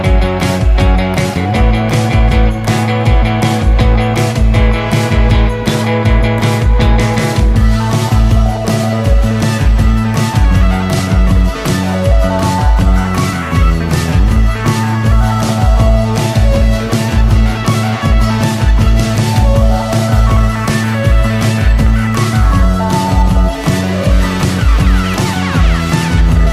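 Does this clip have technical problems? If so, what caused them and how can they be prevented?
No, the signal shows no technical faults, so there is nothing to trace back to a cause or to prevent.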